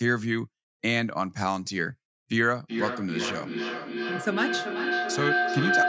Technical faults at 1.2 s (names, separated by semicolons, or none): none